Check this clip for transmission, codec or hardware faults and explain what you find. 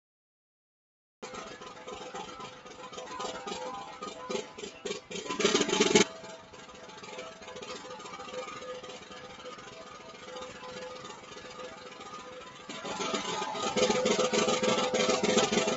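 Three faults are audible: a speech-style noise suppressor acting on the whole clip, a late start, and three places where that suppressor pulls sound down harder. The band stops at 8 kHz, as expected from the Opus call path.

Noise suppressor applied to music or sounds: throughout, a suppressor built for speech treats sustained tones and decays as noise, so level swings by around 10 dB. Onsets survive while held parts sink and pump. Unlike a compressor, the dips follow steadiness, not loudness.

Cut-off start: the audio is digital silence until 1.23 s, then enters abruptly mid-sound because capture began late. There is no attack or fade-in. A fade-in would rise gradually from low level, but here the sound appears at full level out of nothing.

Sound cut by the noise suppressor: at 1.55 to 1.88 s, 2.51 to 2.77 s and 6.39 to 6.88 s, the suppressor classed the material as noise and dropped it by about 5 dB. 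A dropout would leave silence or a gap, but here the sound dips and thins without breaking.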